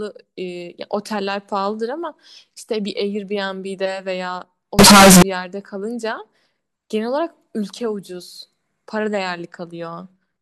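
From 4.79 to 5.22 s the speech turns into a loud, harsh, buzzing block of sound, with the background noise brought up to the same level as the voice, though the pitch contour can still be followed. This is consistent with a float read as integer fault: 32-bit float samples likely read as 32-bit integers, so the sign and exponent bits dominate each value and the waveform flattens into a near-square shape at an almost fixed, high level.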